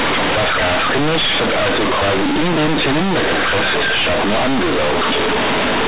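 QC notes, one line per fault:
Throughout: companded audio read as linear. A-law bytes play as plain 8-bit samples, unexpanded. Quiet speech becomes loud, buzzy distortion, with noise in pauses.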